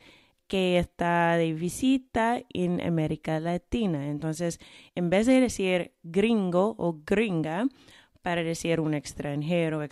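Between 5.13 and 5.37 s the speech runs into hard clipping. For about a quarter of a second, the signal goes roughly 2 dB past what the stage can pass. The peaks above that ceiling are cut off flat. Those squared tops add harmonics high in the spectrum that the sound never had. The overload is small, so it is heard as a brief crackle riding on the loudest moments, not a constant fuzz.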